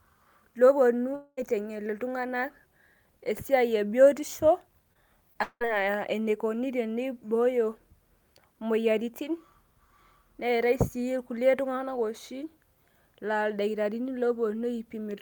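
From 1.15 to 1.39 s there is a gap of about 220 ms. The last sound carries on as a fading buzz or hiss for most of it, then about 30 ms of silence follows. The speech resumes with that stretch simply gone. This is likely a long network dropout. No audio reached the receiver, so it stretched out what it last had.

At 4.93 to 4.97 s comes a short concealed packet loss. About 20 ms never arrived in time. The decoder patched the hole by extending the preceding sound and then blended back in. It is heard as a brief smear. A second one follows at 5.33 to 5.37 s, again about 20 ms, with the same quick wobble.

Right after, from 5.43 to 5.63 s, a second gap of about 180 ms appears. The final sound continues as a decaying buzz or hiss, then about 60 ms of silence, before the speech returns with a piece missing. Again this is likely a long network dropout.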